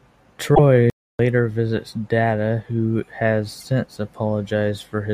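A speech clip with damaged data in the compressed stream at 0.52–0.59 s and again at 3.60–3.63 s, just after "who has". Each is a short glitch where the decoder misreads corrupted frames and resynchronises, seen as a smeared broadband smudge on the spectrogram. From 0.90 to 1.19 s the sound drops out for about 290 ms before resuming, a flat line in the waveform, likely a playback stall from the player running out of data.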